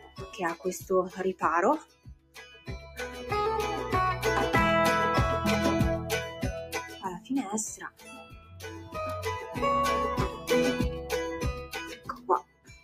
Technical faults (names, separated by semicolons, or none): noise suppressor applied to music or sounds; sound cut by the noise suppressor